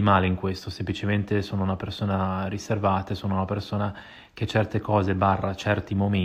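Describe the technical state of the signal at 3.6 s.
At 3.6 s the speech signal is intact, with no audible technical fault at that point.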